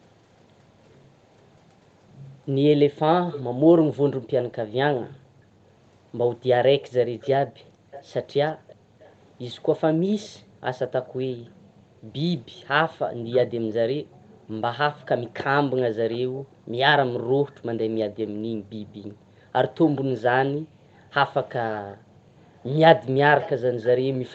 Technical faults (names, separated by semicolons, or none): echo leak